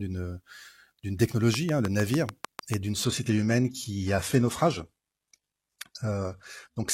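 From 1.54 to 2.75 s there's a train of clicks, about ten evenly spaced pops at 6.7 per second, sitting well above the speech and ticking through the gaps too. Likely some interference from nearby equipment or a faulty connection injecting a regular pulse.

Then at 3.05 s, right through to the end, the audio drops to a lower-bitrate version of the adaptive stream with no gap. The treble vanishes above 12.3 kHz, with codec artefacts creeping in, which suggests a switch down to a low-rate HE-AAC stream after the connection slowed.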